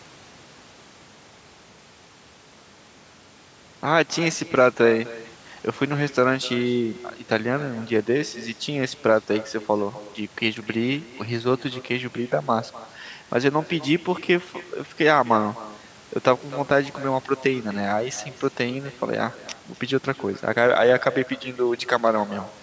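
Speech over a call, with echo with no canceller running throughout. Every phrase returns roughly a third of a second later, about 19 dB quieter and thin. The far end's loudspeaker feeds its microphone, and nothing removes that loop. The call's microphone processing limits the band to 8 kHz.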